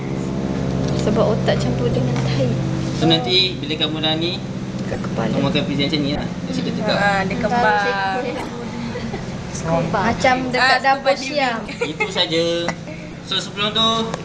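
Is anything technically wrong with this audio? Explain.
Yes, there are corrupt frames being decoded, at 0.89–0.97, 1.91–1.99, 4.93–5.01, 6.15–6.21, 8.35–8.50, 9.83–9.86, 11.59–11.68 and 13.09–13.16 s. Damaged compressed frames get played anyway, so misread data throws energy into the wrong frequencies. Each one is a short chirp, squeak, blip or burst of noise, peaking around -10 dBFS and dropping to about -15 and -20 dBFS in the last two.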